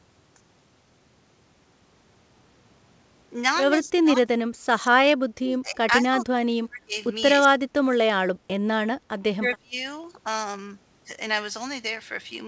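Speech, carried over a call path whose band stops at 8 kHz, has four stretches of speech suppressed in double talk: 3.82–5.85 s, 6.01–6.94 s, 7.44–8.50 s and 9.37–9.76 s. The level falls by up to about 25 to 40 dB, likely because an echo canceller ducked the talker while the far side spoke. On a waveform these appear as sudden hollowed-out envelopes, and on a spectrogram as faded, thinned bands.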